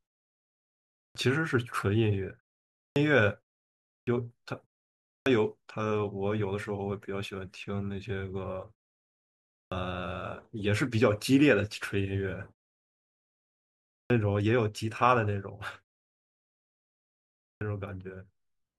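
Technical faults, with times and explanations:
0.91, 2.72, 3.83, 5.02, 9.5, 13.85 and 17.38 s, clipped start after a pause: the output wakes from silence late, swallowing roughly a quarter second each time, so speech starts abruptly.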